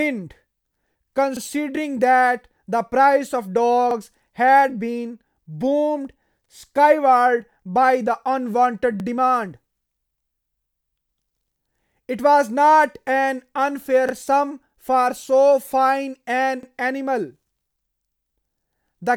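Overlapping chunks occur at 1.37, 3.91, 6.46, 9.00, 11.54, 14.09 and 16.63 s. The speech was handled in 2.5 s chunks, each starting 44 ms before the last ended, so that sliver plays twice at every join, causing a regular stutter.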